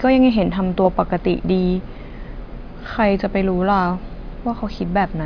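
No technical faults turn up anywhere in this speech recording.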